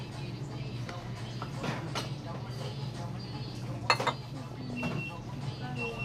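From 4.46 to 4.84 s the sound turns to DAB burbling: weak reception, around half a percent bit errors, let corruption slip past error correction into the MP2 data, so individual sub-bands jump in level frame by frame. Unlike a dropout's silence, it adds short blips of noise.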